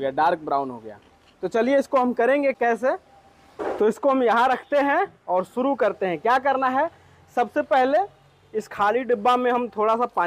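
No technical faults can be heard anywhere in this recording.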